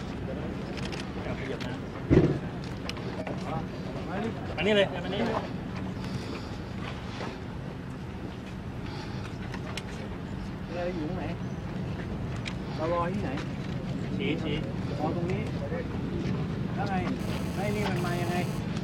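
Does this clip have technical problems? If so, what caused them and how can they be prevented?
Yes. A GSM phone buzz appears from 17.20 s to 18.60 s, a hard, raspy tone at about 217 Hz with many harmonics, sitting about 12 dB below the sound and unrelated to it. A nearby 2G handset is transmitting in bursts roughly 217 times a second, and the audio circuitry rectifies those radio pulses into audible buzz. The short, intermittent burst fits a phone doing a data transfer rather than a steady call. Keep phones well away from microphones, cables and preamps, or switch them to airplane mode, during recording.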